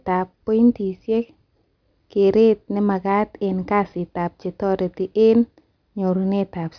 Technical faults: none

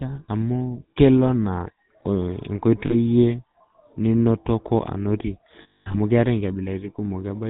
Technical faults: GSM full-rate codec; lost GSM frames

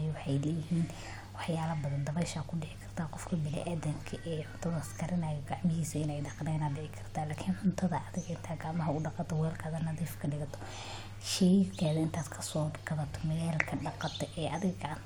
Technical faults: none

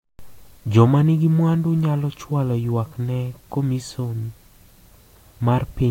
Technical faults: none

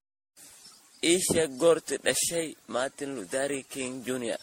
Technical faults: generation loss

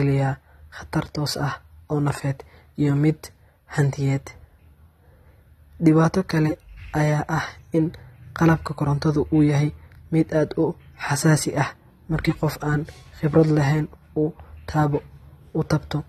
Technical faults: AAC compression

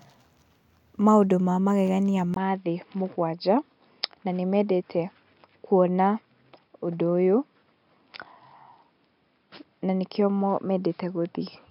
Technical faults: input switched to a poorer device

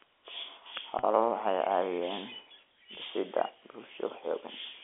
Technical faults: packet loss with pitch repetition

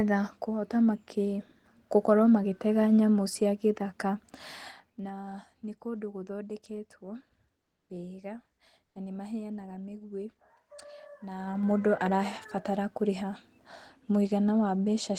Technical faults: zipper noise; comfort noise in place of the background

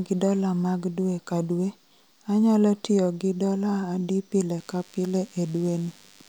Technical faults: DECT cordless phone buzz

